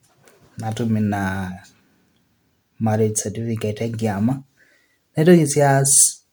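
From start to finish the speech has that swirly, hollow, smeared quality of generation loss, likely from around seven rounds of MP3 encoding at what sounds like 128 kbit/s. Each pass piles on fresh quantisation damage, so attacks blur, though content still reaches 20.1 kHz.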